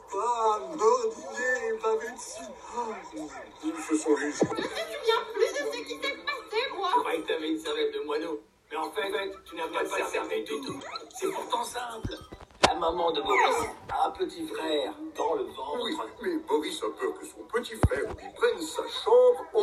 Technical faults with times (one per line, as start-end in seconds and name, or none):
9.04-10.80 doubled audio track